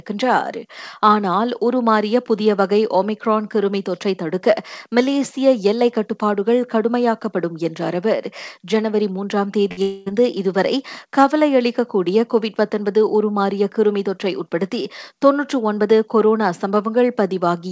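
At 9.68 s the audio briefly smears. This is short concealed packet loss. About 20 ms of the call reached the decoder too late. The receiver covered the gap by extending the last sound for those 20 ms, then blended back into the real signal. The result is a quick wobble rather than a clean gap. A short consonant here can go missing. The smear runs to 9.72 s.

From 9.72 s to 9.79 s comes a burst of packet loss. About 40 ms of audio is missing. The receiver filled about 50 ms with a continuation of the last sound, turning it down as the gap went on. A voiced sound turns into a short held buzz, and an unvoiced one into a fading hiss. The audio then picks up further on, with the lost portion gone.

From 9.82 s to 10.08 s the sound turns into a drawn-out buzz or hiss that fades and never falls to silence. About 240 ms of real audio is absent, and about 238 ms of synthetic continuation fills the hole. 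A few milliseconds are dropped when the real signal resumes. The likely cause is a long network dropout. Throughout the clip, the call path carries nothing above 8 kHz, which fits a 64 kbps G.722 stream.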